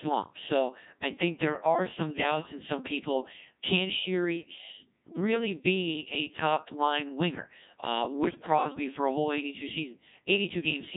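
Speech heard entirely through the Codec 2 vocoder, heavily degraded at a rate that fits about 1.6 kbit/s: the voice is rebuilt from sine waves carrying only pitch, voicing, energy and envelope, so it sounds buzzy and robotic, and a spectrogram shows stiff harmonic combs with smeared formants and no natural waveform detail. From 4.41 to 4.58 s, just before "really be a top", bit errors on digital voice radio corrupt a few frames, making the synthetic voice jump in pitch, level and tone colour into a warbling bleep. This shows as abrupt blocky discontinuities in harmonics and envelope.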